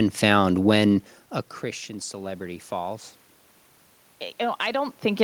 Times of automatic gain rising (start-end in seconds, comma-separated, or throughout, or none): 1.86-3.11